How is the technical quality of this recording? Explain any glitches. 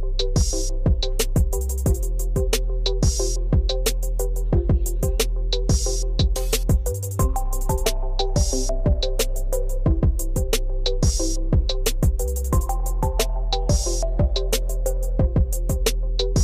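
No glitches can be heard anywhere in the recording. The sound runs without interruptions, dropouts or other technical faults.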